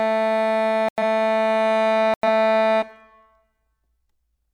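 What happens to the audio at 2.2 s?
The music drops into abrupt silence from 2.14 to 2.24 s, a corrupt frame muted: damaged compressed data was rejected by the decoder and replaced with silence, a gap that fits about two frames. Unlike concealment, nothing is smeared or repeated, and timing holds afterwards.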